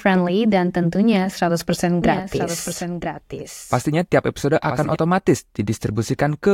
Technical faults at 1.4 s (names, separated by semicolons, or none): none